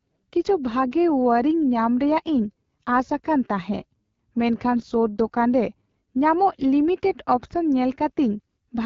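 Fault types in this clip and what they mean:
AMR wideband (HD Voice) codec: low-rate speech codec, here about 8.85 kbit/s, leaving speech plainly rough and raspy, with nothing above roughly 7.4 kHz.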